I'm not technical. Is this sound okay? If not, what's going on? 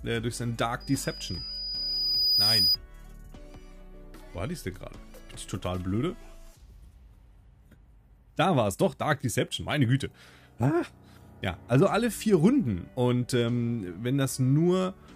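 No. From 0.80 to 2.77 seconds there's a piercing, high whistle, around 4.9 kHz, that swells over about a second and a half until it's louder than the rest of the sound. This is loudspeaker feedback squeal: a microphone picked up the sound coming out of the speaker it was feeding, so that one pitch went round and round the loop, getting louder each time.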